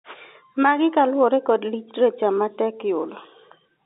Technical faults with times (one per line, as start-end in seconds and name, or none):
none